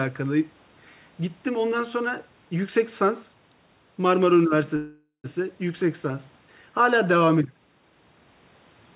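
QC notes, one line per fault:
4.76–5.27 s, call audio freeze: the speech stops and the last sound is stretched into a fading buzz-like tail for about half a second, the final 100 ms falling to silence, before the speech resumes where it left off with nothing skipped. This is likely a jitter-buffer underrun: delayed packets left the receiver to fill about 0.48 s, pushing everything after it later, heard over the call path's narrowband sound with nothing above 4 kHz.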